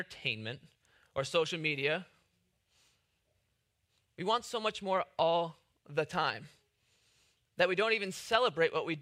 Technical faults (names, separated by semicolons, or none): none